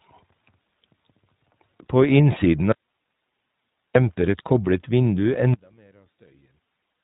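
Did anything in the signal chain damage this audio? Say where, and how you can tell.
Yes. The iLBC codec shaped the whole clip: speech sounds rough and synthetic in 20 ms frames, and a spectrogram shows a hard ceiling at 4 kHz, which fits iLBC's 15.2 kbps mode.

From 2.72 to 3.95 s, an audio dropout to a faint residue leaves 1.23 s of hiss about 55 dB down before "demper et koblet". The waveform collapses abruptly to a thin band, likely because the wanted signal was lost while the path after the break stayed live.

From 5.54 s to the end, one channel is inverted. The mono sum drops about 35 dB as the two channels cancel, and the waveform shrinks sharply. The likely cause is reversed polarity on one stereo channel before the mono sum.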